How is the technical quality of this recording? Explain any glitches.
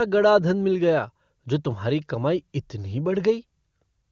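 Nothing faulty can be heard in this recording.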